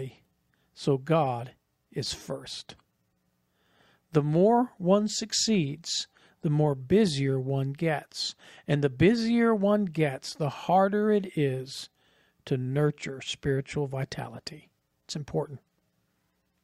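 No technical fault can be heard anywhere in this speech recording. Nothing in it calls for a timestamp or an explanation.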